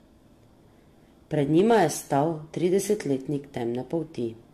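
Speech runs throughout with a swirly, hollow smear, bandwidth ending near 14 kHz, and blurred attacks beyond what one 64 kbit/s AAC-LC encode would give, pointing to generation loss, likely around five re-encodes. From 1.58 to 2.20 s, hard clipping adds harsh, bright crackle on peaks, overdriven about 3 dB. Unlike soft saturation, its flat-topped peaks leave the quieter passages unclipped.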